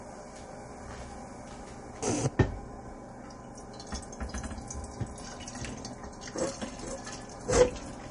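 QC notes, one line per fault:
Throughout: likely MP3 compression, treble cut flat above about 10.6 kHz and weak detail flickering into watery swirl, which fits roughly 40 kbps; unlike plain low-pass filtering, the swirl sets it apart.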